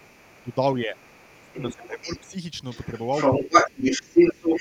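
From 0.00 to 0.55 s, faint leakage of the other side's voice sits far beneath the speech, about 30 dB down, likely residual loudspeaker echo the canceller missed. Between 0.43 and 2.36 s, speech is suppressed in double talk for around a second in total, dipping by as much as about 25 dB, likely because the canceller turned everything down while both sides spoke. On a waveform the envelope pinches inward, and a spectrogram shows the talker's harmonics thinning or vanishing in patches. The other side's voice returns at 0.97 to 2.31 s at about 15 dB below the speech, then from 2.70 s to the end it dominates at about 10 dB above it, as a second, unrelated harmonic pattern overlaid across the spectrogram. Within that, from 3.37 to 4.14 s, the talker again drops by up to about 20 dB for a few hundred milliseconds.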